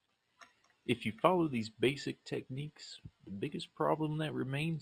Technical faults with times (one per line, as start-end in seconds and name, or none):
0.00-4.81 imaging from linear upsampling